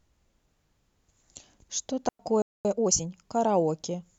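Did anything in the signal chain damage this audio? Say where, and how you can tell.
Yes. A digital wireless dropout sits at 2.09 to 2.19 s: about 105 ms of near silence, cut cleanly in and out. The radio link lost too much data and the receiver muted. No hiss or noise burst surrounds it, which separates it from an analogue wireless fade.

A playback stall follows from 2.42 to 2.65 s, about 230 ms where the sound halts mid-flow and then resumes. The player likely ran short of buffered data or was blocked. It is longer than the wireless mute and belongs to the output stage, not the link.

Time-compressed catch-up runs from 2.65 to 3.09 s. The speech is hurried to 1.5 times normal speed, with no rise in pitch. The player is trimming its backlog by cross-fading out small slices. A plain speed-up would have raised the pitch.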